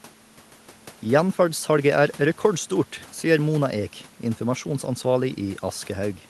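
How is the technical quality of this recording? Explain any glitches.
Listening to the recording, nothing stood out as a technical problem.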